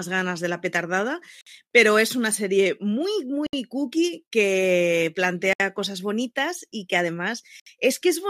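Silences cut into the speech at 1.41–1.47, 3.47–3.53, 5.53–5.60 and 7.60–7.66 s, every 2.0 s. Each is a gap at a join of encoded pieces. The first lasts 54 ms, the rest 67 ms. Separately encoded segments were joined untrimmed. Edges are smeared.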